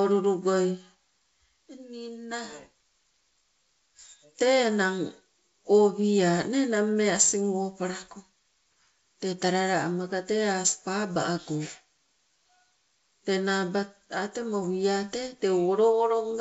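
No technical faults occur anywhere in the speech, which is carried over G.722 wideband telephone coding at 64 kbit/s.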